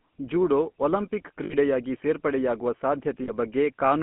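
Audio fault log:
Throughout, GSM full-rate codec: the speech is rebuilt by a vocal-tract filter driven by sparse, evenly spaced pulses, which leaves a plainly audible buzzy, gravelly roughness. The band runs only from about 150 Hz to 3.4 kHz, which fits 13 kbps full-rate GSM.
1.44–1.55 s and 3.24–3.30 s, lost GSM frames: about 60 ms and then 40 ms of speech are missing. Each gap is filled by repeating the last good frame's settings, so the sound hangs as a short, rough, metallic ring instead of cutting out.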